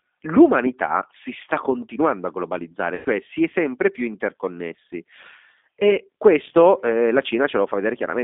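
Speech throughout sounds slightly rough and synthetic, with nothing above about 3.6 kHz and little below 250 Hz. That is the G.729 codec at work, fitting an 8 kbit/s low-bitrate coder that rebuilds each 10 ms frame from a vocal tract filter, a pitch predictor and a handful of pulses. From 2.95 to 3.09 s the sound is stretched out and fades. This is VoIP packet loss concealed by the speech codec: about 100 ms of audio went missing, and the decoder extrapolated from its last pitch and filter settings while lowering the gain.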